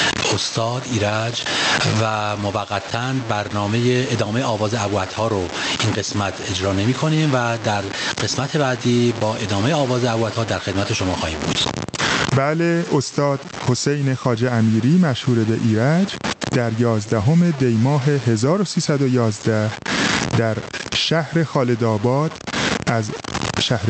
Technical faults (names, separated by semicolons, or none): low bit depth without dither; gain pumping